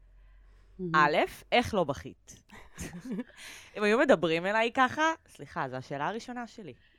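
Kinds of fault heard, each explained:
Sample clock jitter: the converter's unsteady clock mistimes samples, adding a faint hiss on steep, bright parts of the speech from 5.59 s to the end, roughly 50 dB down.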